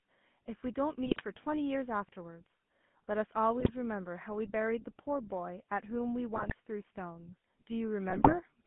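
Throughout, the speech has a buzzy, gravelly roughness and a narrow band from about 150 Hz to 3.5 kHz. This is the GSM full-rate codec, which fits a 13 kbps stream. It rebuilds the voice from a vocal-tract model driven by sparse, regularly spaced excitation pulses.

At 1.06–1.23 s, 3.60–3.70 s, 6.34–6.53 s and 8.10–8.38 s the voice breaks into squawks, pops and gargling. These are GSM bit errors. Corrupted filter, pitch or gain values reach the decoder, warping the spectrum or spiking the level for several frames.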